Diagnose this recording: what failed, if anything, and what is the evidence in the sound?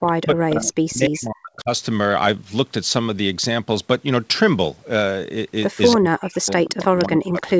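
The speech level sinks by as much as about 40 dB, over 0.0 to 1.7 s and again from 5.97 s to the end at 7.59 s. Likely speech suppressed in double talk by call processing, which ducks the near talker while the far side speaks.

A faint delayed copy of the talker appears at 0.07 to 0.12 s, about 25 dB down, and more clearly at 6.65 to 7.04 s, about 15 dB down, each trailing by 299 ms. This is likely echo leak from a loudspeaker endpoint. Room reverberation would decay continuously, but this is a discrete repeat at one fixed delay.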